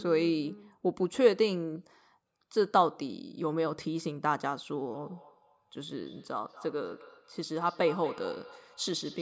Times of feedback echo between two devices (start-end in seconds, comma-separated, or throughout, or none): 4.93-9.21